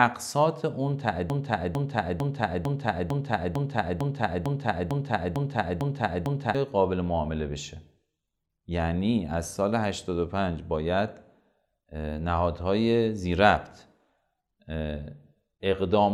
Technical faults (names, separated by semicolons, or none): broken-record loop